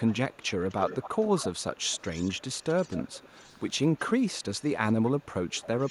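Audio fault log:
0.0–3.72 s, 3.94–4.1 s, 4.27–4.7 s, 4.92–5.26 s and 5.5–5.91 s: echo leak. A faint copy of the voice trails 260 to 267 ms behind, strongest early on, likely from the far end's speakerphone slipping past its echo canceller.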